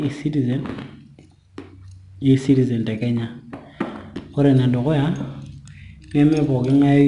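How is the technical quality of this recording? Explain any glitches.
The recording is noticeably degraded throughout. Gritty hiss rides on every louder stretch of speech and the top end stops at 10.6 kHz. This is 4-bit ADPCM compression: each sample is coded as a coarse step from a prediction, and the resulting error noise tracks the level, pointing to roughly 89 kbps.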